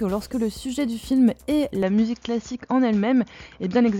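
At 1.83 s the sound abruptly turns duller, with nothing above 6.9 kHz to the end, a faint new hiss and no gap or level jump, likely from the input switched to a poorer device. A spectrogram shows the upper band cut off sharply there.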